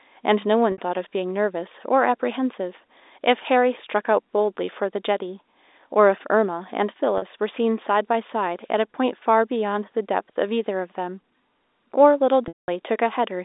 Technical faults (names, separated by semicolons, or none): packet loss with pitch repetition